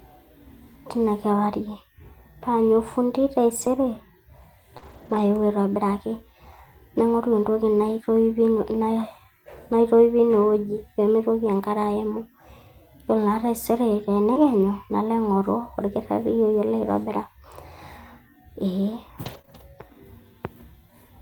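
Speech, with two related network faults that cluster around four moments. In five places the sound turns briefly rough and grainy, without ever dropping out: 3.61 to 3.67 s, 4.82 to 5.20 s, 14.36 to 14.38 s, 19.26 to 19.40 s and 19.49 to 19.55 s. This is a lost packet rebuilt from error correction. Each missing stretch was replaced by a low-bitrate backup copy carried in the following packet, so continuity holds but detail and clarity suffer. The 4.82 to 5.20 s stretch is the longest, about 200 ms of rebuilt audio, which points to ten lost packets close together. Interleaved with these are brief smears and wobbles at 4.77 to 4.84 s, 14.34 to 14.38 s, 19.42 to 19.46 s and 19.46 to 19.49 s. This is short concealed packet loss. Each hole of roughly 20 to 40 ms arrived too late and was filled by extending the preceding sound before blending back into the real signal, which can briefly blur a consonant.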